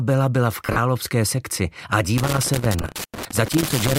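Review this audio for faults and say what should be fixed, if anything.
Lost LE Audio frames occur twice. From 0.66 to 0.78 s the Bluetooth LE Audio link dropped frames scattered across about 120 ms, about 80 ms missing in total with the longest gap around 40 ms. From 2.82 to 2.84 s about 20 ms dropped out. Each time the LC3 decoder filled the hole by repeating the last spectrum with randomised phase signs, so the sound smears into a brief noisy blur instead of going silent. Keeping the link stronger, through shorter range, fewer obstructions and less 2.4 GHz congestion, would prevent these dropouts.

Loose connector crackle runs from 2.18 s to the end of the clip at about 4 s. A worn or dirty contact in the signal path is intermittently making and breaking as it shifts, chopping the signal on and off and producing irregular bursts of scratchy crackle laid over the audio. The second frame-loss smear falls inside this stretch. 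Cleaning or reseating the connector, or replacing the cable or jack, would stop it. The light lossy compression on the clip is normal and needs no fix.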